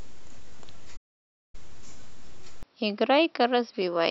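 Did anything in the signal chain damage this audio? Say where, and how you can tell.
Yes. At the playback stage, a playback stall silences the speech from 0.96 s to 1.55 s, about 570 ms, before it resumes. A gap like this in mid-flow, with no click or garbling, points to the player being starved of data or its output thread being blocked. The output simply holds silence until the buffer refills. Likely cause: a scheduling or supply delay upstream of the output device rather than damage to the recording.

At the capture stage, from 2.63 s to the end, the input switched to a poorer device. The band suddenly narrows, the level drops by roughly 5 dB, and a new noise floor appears, sitting around 55 dB below the speech. The change is instant, with no silence at the switch. That is likely the system moving to another microphone or a headset call profile mid-recording.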